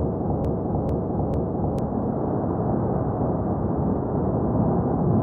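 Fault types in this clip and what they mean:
broken-record loop: From the start to 1.79 s, a 0.45 s fragment repeats exactly, back to back, three times, already under way when the clip begins. The likely cause is a stalled player or stream. The waveform and spectrogram show identical blocks tiled at a 0.45 s period.
channel delay (comb filtering): From 3.84 s to the end, one channel runs roughly one sample (about 0.02 ms) late before the mono sum. This puts the first notch up around 20 kHz, dulling the top. The spectrogram shows energy thinning toward 20 kHz, with little visible waveform change.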